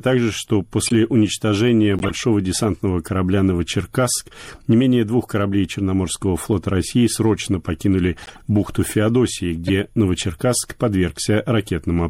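Speech that has likely passed through MP3 compression at a low bitrate, around 64 kbps, which starves the encoder of bits: the treble is cut off and weak frequency lines flicker between frames, so the sound turns watery and swirly, with metallic chirps on s sounds. On top of that, corrupt frames were decoded: damaged compressed data was played anyway, throwing energy to wrong frequencies as short chirps and noise bursts at 0.86–0.92 s, 1.97–2.11 s just before "десантного корабля", 8.22–8.41 s right after "срочно покинули" (softer, about −20 dBFS), and 9.67–9.70 s. The bursts other than the one at 8.22 s peak at about −10 dBFS.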